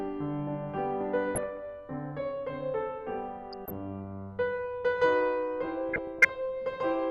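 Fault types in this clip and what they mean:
DAB burbling: at 1.35–1.57 s, 3.52–3.73 s and 5.89–6.29 s the music gets short blips of noise. Weak reception lets a fraction of a percent of bits slip past error correction, corrupting samples in single sub-bands, and any scale factors hit make individual sub-bands jump in level for up to a frame.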